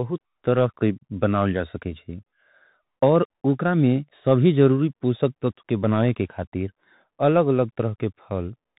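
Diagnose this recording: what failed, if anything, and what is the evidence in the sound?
Codec stage: Bluetooth CVSD headset codec throughout. The spectrogram cuts off near 4 kHz, and s sounds turn scratchy over granular hiss as the one-bit step-tracker lags fast highs.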